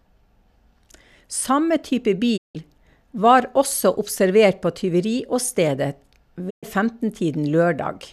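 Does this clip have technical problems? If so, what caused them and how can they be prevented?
Yes. The speech has two digital broadcast dropouts. At 2.36 s the sound fades out over about 20 ms. It stays silent until 2.57 s. A second hole runs from 6.49 s to 6.65 s. In each case the receiver muted because frames were lost or failed their checks. It resumed once good frames arrived. The first gap fits about seven lost frames, the second about five. That audio is gone. A stronger, cleaner signal with better error protection would prevent this.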